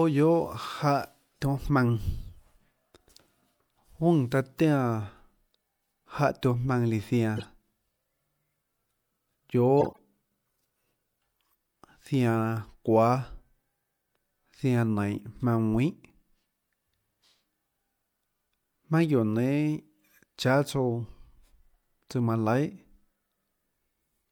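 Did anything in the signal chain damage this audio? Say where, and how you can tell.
Yes, the codec. A corrupt frame decoded at 1.62–1.67 s, 7.37–7.45 s and 9.80–9.98 s: short chirpy noise bursts foreign to the speech, each louder, the last longest. Bit errors in compressed frames got decoded anyway, throwing energy at wrong frequencies.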